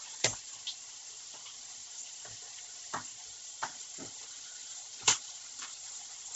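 Throughout, the sound stops near 7.8 kHz and carries a grainy, breathy haze, likely from heavy Bluetooth LC3 compression at a low bitrate, with noise-filled upper bands.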